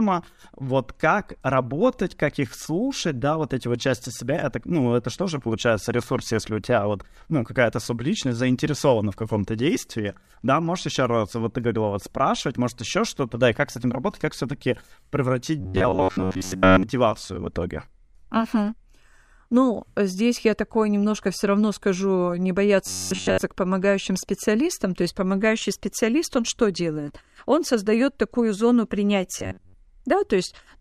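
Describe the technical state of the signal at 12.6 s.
At 12.6 s the speech signal is intact, with no audible technical fault at that moment.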